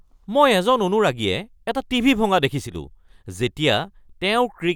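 From 2.67 to 2.76 s the speech dips abruptly by about 6 dB, likely one channel dropping out, halving the summed mono signal briefly.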